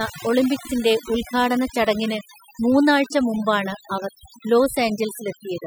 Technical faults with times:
0.00-5.67 overdone noise removal

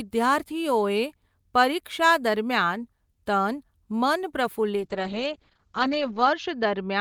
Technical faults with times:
4.77-7.00 call bitrate drop

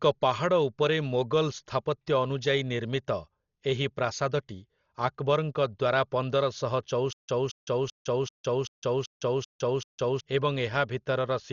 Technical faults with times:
0.00-11.52 Dolby Digital compression
7.13-10.20 stutter with silent gaps

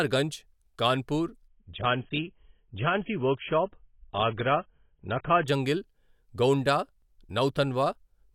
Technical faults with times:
1.48-5.48 adaptive stream at a lower bitrate

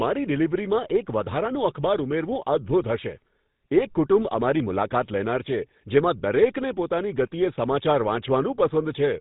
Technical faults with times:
0.00-9.20 GSM full-rate codec

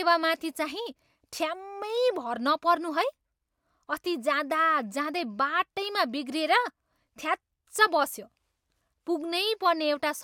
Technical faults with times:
none

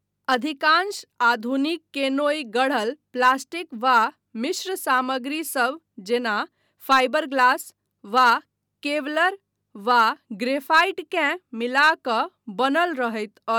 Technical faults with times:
none

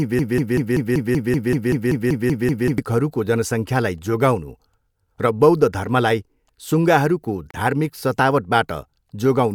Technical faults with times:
0.00-2.78 broken-record loop
7.51-7.54 gap at a join of encoded pieces

